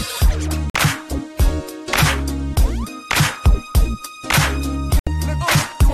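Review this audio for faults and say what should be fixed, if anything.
Two digital broadcast dropouts break the sound, from 0.70 to 0.75 s and from 4.99 to 5.07 s. In each, the receiver stopped getting good frames and muted until valid data returned. The holes last 48 ms and 72 ms, which fits two and three lost frames of roughly 24 ms each. The gaps go silent rather than being filled with repeated or smeared sound as concealment would, and the audio resumes later in the programme. Improving reception margin and error protection would keep frames passing their checks.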